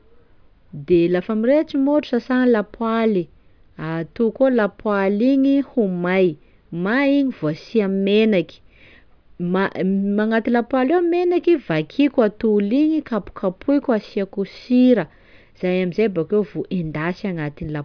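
No technical faults can be heard anywhere in the recording, with the signal holding steady throughout.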